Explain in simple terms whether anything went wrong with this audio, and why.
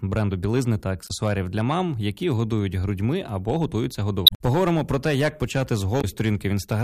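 Two things went wrong. Hard clipping runs through the whole speech clip: the loudest peaks, roughly one percent of the signal, were too big to pass and got sliced flat, adding crackle. Damaged data in a compressed stream causes three brief glitches. The decoder misread corrupted sections: from 1.05 to 1.11 s, between "бренду білизни та" and "для мам які годують"; from 4.24 to 4.41 s, after "годують грудьми або готуються"; and from 5.98 to 6.05 s.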